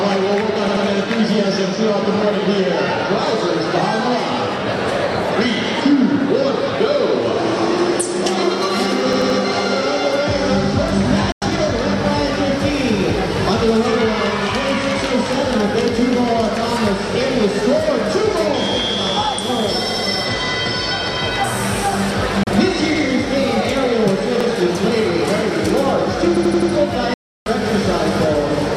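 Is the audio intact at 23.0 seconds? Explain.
No. New audio arrived late, so the device replayed its last buffer once, a repeated buffer from 22.96 to 23.04 s. The 85 ms piece sounds twice with a hard join, a short stutter that fits a 4096-sample buffer.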